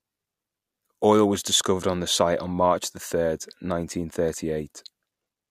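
No technical faults are audible.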